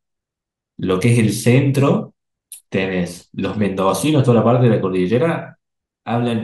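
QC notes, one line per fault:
No technical faults are audible; the speech signal stays continuous and stable across the whole recording, with nothing in the audio path that calls for attention.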